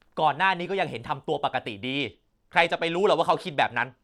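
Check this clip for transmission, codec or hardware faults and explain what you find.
One fault is present in the speech: a Bluetooth SBC bit pool drop from 2.00 s to the end at 4.03 s. Sound that fits a bit pool falling from 28 to 14, near 108 kbps, starves the upper sub-bands, so treble dulls and gritty noise appears. A spectrogram shows the high band thinning abruptly.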